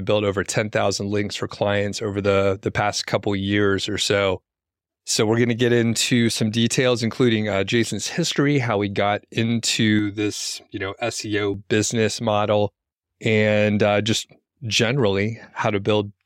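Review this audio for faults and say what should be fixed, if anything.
From 9.99 to 11.54 s, just before "business model and uh", the speech turns hollow and phasey. This is channel delay (comb filtering): one channel arrives roughly 3 ms late, and when the two are summed to mono, matching content cancels at evenly spaced frequencies, starting around 150 Hz. Unlike a low-pass or muffled fault, the high end is still present but riddled with fixed notches, and unlike reverb, no tail or added space follows the speech. Keep both channels sample-aligned before any mono fold-down, and check the sum in mono.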